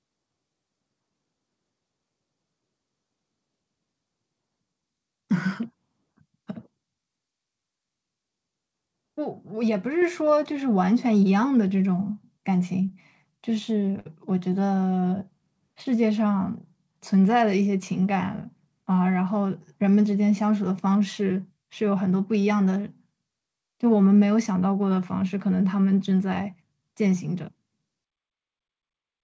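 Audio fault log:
10.02 s, microphone volume stepped up: the whole signal, speech and the background noise under it, rises by about 3 dB in a single instant, with no ramp. Because everything lifts together rather than only the talker, this is a change in input gain ahead of the encoder, not the speaker getting louder. It fits call software raising the device's capture volume once after judging the microphone too quiet.
13.99–14.08 s, short stall from a late packet: a sound is held for about 59 ms longer than it should be, then the speech resumes exactly where it left off, so nothing is lost, only delayed. The held portion has a slight buzz or dip. This is the receiver's jitter buffer running dry while a packet arrived late and repeating the last audio to cover the gap. The whole stream then runs about 59 ms later.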